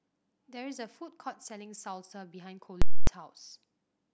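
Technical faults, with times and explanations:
2.82 to 3.07 s, invalid numbers at full scale: a processing calculation produced infinite or invalid values, and these were forced to the maximum positive or negative sample value for one 256 ms block, which fits a 4096-sample processing block. The output is pinned flat at one extreme value, far beyond the speech peaks, so the speech drops out entirely. The only sounds are a very loud pop where the signal jumps to that value at 2.82 s and another where it jumps back at 3.07 s.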